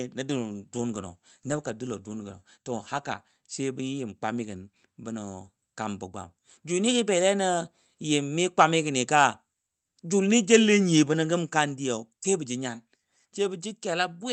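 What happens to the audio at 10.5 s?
Microphone overload from 10.53 to 10.56 s: the speech peaks run about 5 dB past the converter's ceiling, likely from input gain set too high, so their tops are sheared off. It sounds like a brief harsh crackle. The waveform shows flattened peaks, and the spectrogram shows a thin vertical smear of broadband energy.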